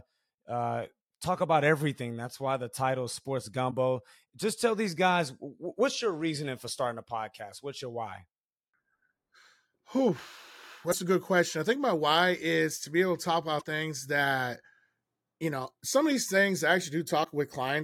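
Speech with damaged data in a compressed stream. Brief corruptions occur at 3.67–3.73 s, 10.91–10.94 s before "a good question I", 13.57–13.63 s between "be able to talk" and "things that", and 17.20–17.26 s after "some of these things". Corrupted bytes make the decoder misread frames and resync.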